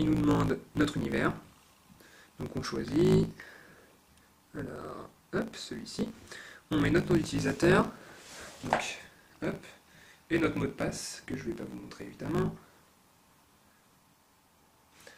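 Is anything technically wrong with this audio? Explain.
Yes. A block size mismatch with truncation runs through the whole clip. One stage hands over longer blocks than the next stage takes in, so the tail of every block is discarded. The cut edges repeat at a steady rate, giving a buzz at about 54.4 Hz. The rate fits 1024-sample blocks being cropped. Because material goes missing each block, the audio plays about 1.16 times faster than it should. The timbre stays the same.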